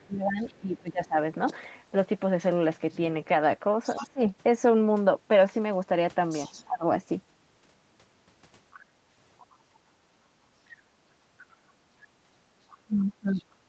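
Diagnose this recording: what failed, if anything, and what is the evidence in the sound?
Call processing: the other side's voice leaking through, very faint at 0 to 0.79 s, then about 20 dB below speech from 3.84 to 13.44 s. Likely residual echo, seen as a second faint harmonic trace on the spectrogram.

Speech suppressed in double talk, likely by the echo canceller: dips totalling around 1.5 s between 0.06 and 6.85 s, up to roughly 20 dB. Another half-second dip at 12.85 to 13.46 s reaches roughly 25 dB. These show as notches in the waveform envelope.

Background gated by the echo canceller, 9.92 to 12.41 s: the room noise drops by up to about 13 dB for around 0.7 s in total, leaving pale gaps in the spectrogram's noise floor.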